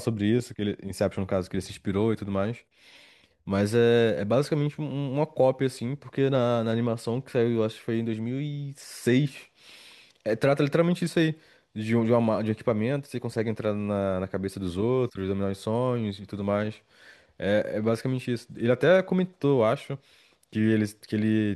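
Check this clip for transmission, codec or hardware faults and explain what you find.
Checking this clip turns up no faults to explain.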